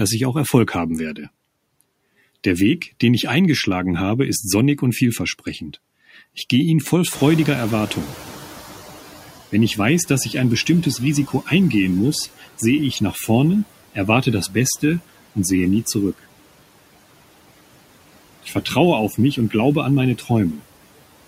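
Noise suppressor artifacts run throughout the speech: the suppressor lowers bands it judges to be steady noise by about 18 dB, frame by frame.

Noise suppressor catching up, 7.12 to 9.4 s: after "gehe ihn voll" the room noise jumps by about 20 dB, and the lagging estimate lets it through, cut by only about 12 dB at first, until it adapts after about 2.3 s.

Speech cut by the noise suppressor, at 18.43 to 18.66 s and at 20.18 to 20.3 s, just after "an meine": parts of the speech are mistaken for noise and turned down by about 14 dB and about 11 dB, for roughly a tenth of a second each, sounding swallowed.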